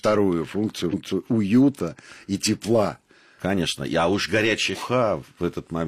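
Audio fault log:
0.89–0.94 s and 4.69–4.76 s, compressed frames skipped: the speech jumps ahead, losing about 200 ms before "уюта и тепла" and about 150 ms later. Whole 46.4 ms frames were dropped, around four and three.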